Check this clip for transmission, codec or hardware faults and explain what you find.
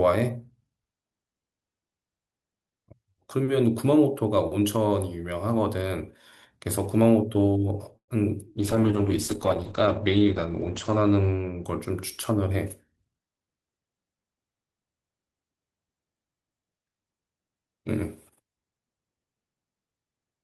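Three transmission faults occur in the middle of this speech clip. There is a brief stall, then a long stretch of degraded coding, and finally a short hurried passage.

Call audio freeze, 7.97 to 8.10 s. The speech stops and a fading fill covers about 108 ms, most of it, around 90 ms, near silence. Speech resumes where it left off, nothing lost, but now 108 ms later. The likely cause is delayed packets draining the jitter buffer.

Call bitrate drop, 8.58 to 13.29 s. The sound turns rough and muffled. The top end falls from 20 kHz to 8 kHz. This fits the encoder being pushed from around 64 kbps down to about 9 kbps after the bandwidth estimate fell. It is worst for about 2.2 s.

Jitter buffer speed-up, 12.3 to 13.55 s. Speech runs at about 110% speed with unchanged pitch and sounds hurried. The receiver trims many short pitch-period pieces, roughly 150 ms in total, to shed extra buffered delay.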